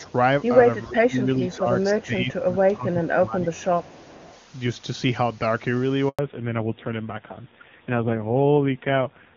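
Echo leak, from 0.01 to 0.12 s, is a faint delayed copy of the sound, far below the main level, arriving about 410 ms late. The likely cause is a loudspeaker at the far end whose echo canceller let part of its microphone pickup slip back into the call. The same echo returns at 1.42 to 1.59 s, noticeably louder at around 20 dB under the speech, then as short quiet scraps at 2.01 to 2.05 s and 3.54 to 3.65 s, and as a longer trail from 3.83 to 4.39 s.

Speech suppressed in double talk runs from 0.87 to 1.68 s and again from 1.94 to 3.71 s. With both sides active at once, the echo canceller was likely unable to separate the local talker from the returning loudspeaker signal and turned everything down. The speech sinks by as much as roughly 20 dB in the first stretch and about 15 dB in the second, dipping for most of each span.

A handover gap at 6.09 to 6.19 s leaves a 100 ms hole. The speech fades within a few tens of milliseconds and goes silent while the call switches networks, so whatever fell inside that window is gone.

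Fallback to narrowband follows straight after, from 6.19 s to the end. Before the switch the HD Voice codec carries the speech cleanly, but from here nothing above 4 kHz remains. The sound turns dull and boxy with a raspy edge, which fits a drop to a low-rate narrowband AMR mode of around 6 kbit/s.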